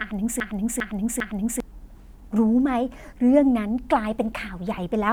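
From the very start of the speech the clip is already caught in a broken-record loop, which runs until about 1.6 s. A 0.4 s fragment repeats three times back to back, each pass identical, and the speech resumes only after it. Likely cause: a stalled player, encoder or stream that kept resending the last fragment it held, so whatever should have played then is gone. Unlike an echo, the repeats don't fade or overlap; unlike a stutter, the fragment is long enough to be recognisable.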